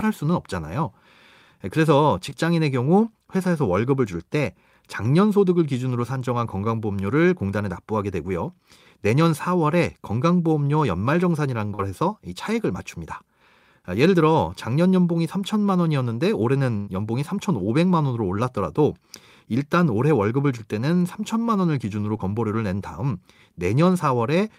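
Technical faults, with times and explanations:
2.29–2.33 s, 11.75–11.81 s and 22.17–22.21 s, short concealed packet loss: each is a brief smear or slight wobble in the speech, where a sliver of sound seems held over rather than moving on. Around 20 ms of audio went missing at the first and last points and 40 ms at the middle one. The receiver patched each gap by extending the sound just before it, then eased back into the real signal, so the join blurs instead of clicking.
16.77–16.89 s, burst of packet loss: the speech briefly stalls into a held, fading continuation of the last sound and then picks up slightly further on, with a fragment skipped. About 100 ms of audio never arrived, and roughly that much was filled by stretching the preceding sound while turning it down. There is no silent gap, so it registers as a stuck, dying-away moment followed by a jump forward rather than as a dropout.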